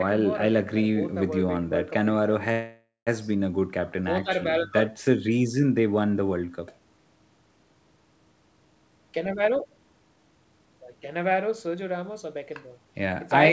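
From 2.52 to 3.09 s the speech halts in a call audio freeze, likely from packets stalling and draining the jitter buffer. The receiver extends the last sound as a fading buzz, ending in roughly 170 ms of silence, then resumes where it stopped, inserting a gap of about 0.55 s.

Between 8.75 and 12.95 s a jitter buffer speed-up trims repeated pitch-period slices to work off the excess delay, roughly four-tenths of a second overall. The speech runs about 9% fast at unchanged pitch and sounds hurried. Content above 8 kHz is absent throughout, which fits the wideband call codec.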